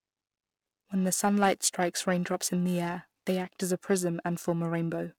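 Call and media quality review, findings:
Periodic clock jitter, whole clip. Rough metallic edge on speech, strongest on sibilants, absent in pauses. Converter clock modulated near 1 kHz, putting sidebands at that spacing around every component. Unlike fixed-tone interference, nothing audible in silence.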